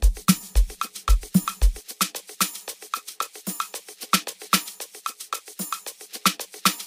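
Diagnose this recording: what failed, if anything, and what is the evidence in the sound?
Nothing failed: the sound holds no audible evidence of a fault at any stage.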